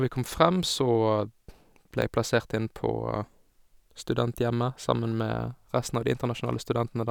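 At 2.02 s the speech is broken by a sharp tick: a block of digital silence roughly 3.5 ms long, where the waveform drops abruptly to zero and then jumps straight back. Because there is no fade at either edge, the two hard discontinuities merge into one click rather than an audible gap. A run of samples was written out as zeros, as happens when audio is not delivered to the output buffer in time or a calculation briefly yields invalid values.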